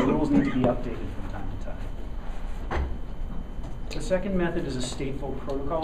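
No technical faults can be heard anywhere in the audio.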